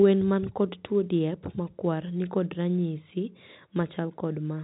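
No faults can be heard in this speech. It passes through G.711 telephone coding, so nothing above about 3.8 kHz comes through, and its quantisation noise stays faint and follows the level of the speech.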